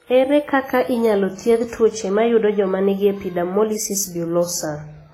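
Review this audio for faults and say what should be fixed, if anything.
The whole speech clip carries stacked compression artefacts from start to finish, most likely from transcoding between lossy codecs. The texture points to a low-rate WMA-style encode around 24 kbit/s that was then re-encoded as HE-AAC around 32 kbit/s. The second encoder wastes bits reproducing the first one's artefacts, then adds its own, so both kinds of grit sit together. Nothing survives above 16.2 kHz. To prevent it, encode once from the original uncompressed master rather than converting between compressed files.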